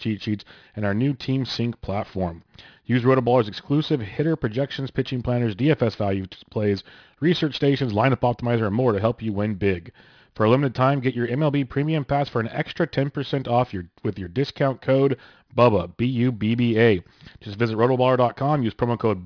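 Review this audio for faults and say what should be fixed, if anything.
Aliasing runs through the whole speech clip. Energy above 5.5 kHz has folded back below that edge as unrelated, gritty tones, roughly 25 dB under the speech, which fits a sample-rate reduction to 11 kHz without an anti-aliasing filter. Prevent it by low-pass filtering below the new Nyquist frequency before resampling.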